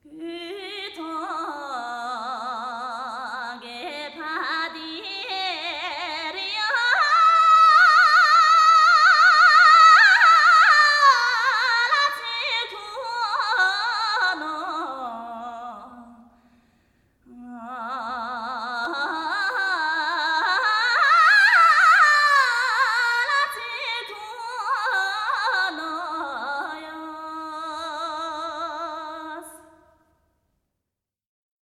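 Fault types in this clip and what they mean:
Repeated buffer: at 18.85 s there is a tiny click with a brief buzzy edge. A sliver of about 1.45 ms sounds four times in a row with hard joins, which fits a 64-sample buffer replayed because fresh audio arrived late. Essentially no audio is lost.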